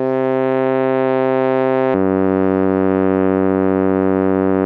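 A section at the wrong speed runs from 1.94 s to 4.66 s, where the music shifts to 0.726 times its recorded rate. Pitch and tempo fall together, roughly five semitones deeper and noticeably slower, likely from playback or editing against the wrong clock.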